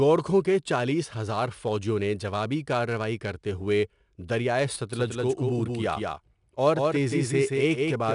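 A gritty hiss rides on top of this speech recording, rising and falling with the loudness of the talker and roughening the sharp consonant attacks. The top end is dull, with nothing above about 10.6 kHz. This is plainly audible 4-bit ADPCM compression. Each sample is coded as a small step from a predicted value, and the error becomes broadband noise tied to signal level. The bandwidth points to a sample rate near 22 kHz, and the grain fits a data rate of around 89 kbps. From 4.93 s, just after "کارروائی کرتے ہوئے دریائے", a full-band second copy of the speech switches in abruptly and trails the original by about a fifth of a second, a few dB quieter. It has no decay or room colouring, and it continues to the end. This is a doubled audio track, likely from the same signal reaching the mix twice, once through a slower path.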